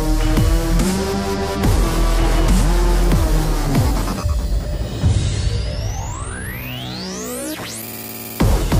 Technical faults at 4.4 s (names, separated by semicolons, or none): none